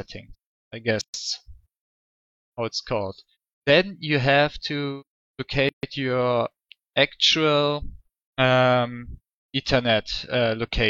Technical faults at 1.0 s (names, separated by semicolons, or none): gap at a join of encoded pieces